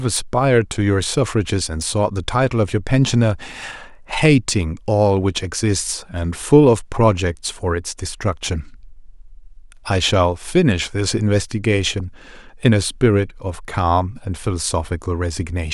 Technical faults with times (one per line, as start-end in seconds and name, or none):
0.13-15.71 clock slip clicks